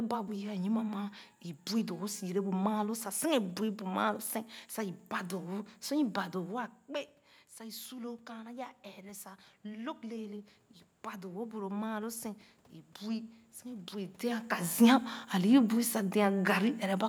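From 7.57 to 12.26 s, automatic gain rising adds about 6 dB after the input drops about 13 dB, swelling voice and room noise together. The waveform envelope and the spectrogram's noise floor ramp up slowly.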